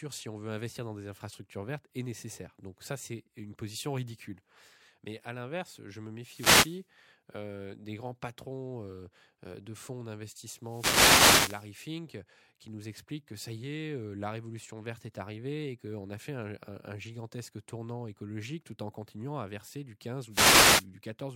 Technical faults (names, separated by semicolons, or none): wireless microphone noise hit